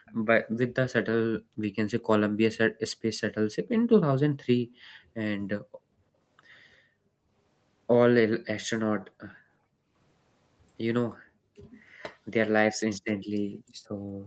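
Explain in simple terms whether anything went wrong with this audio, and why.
Yes, two things went wrong, both tied to the echo canceller on a speakerphone call.

First, background gated by the echo canceller. Whenever the far side's sound came out of the loudspeaker, the canceller clamped the microphone down hard to stop that sound from being sent back. The room's background sound therefore sinks to near silence and then returns. This happens at 0.0 to 0.06 s, 1.4 to 1.69 s, 2.79 to 3.64 s, 4.59 to 7.31 s and 8.99 to 9.94 s, and again from 11.18 s to the end. Within the longer stretches the dips come and go rather than holding steady.

Second, right after the first dip, from 0.06 to 0.14 s, there is a brief, faint copy of the speech arriving about 0.35 s late. This is most likely an echo leak: the canceller did not remove everything the microphone picked up from the loudspeaker, and a scrap of it slipped through and was sent back down the line.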